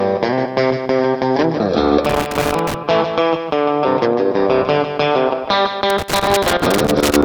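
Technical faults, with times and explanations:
2.05–2.74 s and 5.90–7.23 s, loose connector crackle: Two irregular bursts of crackle and scratching break up the sound. A worn or dirty contact is making and breaking as it shifts. This chops the signal, and any DC on the line adds sharp pops.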